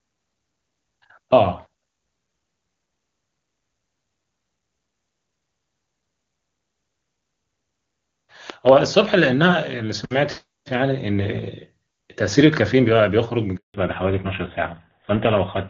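A loud pop appears at 8.50 s: two sharp pops land in quick succession, ending by 8.71 s, peaking about 10 dB above the surrounding speech, which carries on underneath. The likely cause is a sudden voltage step or pulse, such as a plug, switch, static discharge or driver glitch, entering the signal path. The downstream circuitry shapes each pulse into a brief thump.

A handover gap follows at 13.56 s, lasting 180 ms until 13.74 s. The call switched from one network to another, and no speech frames came through during the transfer. The voice fades out within a few tens of milliseconds and stays silent until the new link takes over, so whatever was said in that window is lost.

A fallback to narrowband starts at 13.74 s, right after the gap, and lasts to the end. Up to this point the clear, wideband HD Voice sound fits AMR-WB at its top rate of 23.85 kbit/s. From here nothing above 4 kHz remains, which points to the call dropping to an older narrowband codec such as GSM full rate. 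The voice turns duller and rougher, losing the crisp sibilants and airiness it had before.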